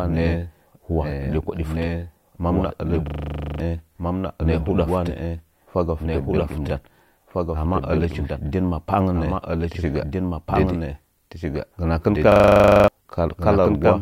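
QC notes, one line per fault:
Throughout, doubled audio track: a second full-band copy of the speech trails about 1.5 seconds behind, roughly 5 dB quieter, dry and without room colour. The likely cause is a second, slower capture path or an edit holding two misaligned copies.
3.08–3.6 s and 12.32–12.88 s, system hang loop: each sounds like a steady buzz at 25 Hz. A 40 ms slice repeats exactly over a dozen times while the driver freezes and the hardware recycles its buffer, losing about half a second of speech.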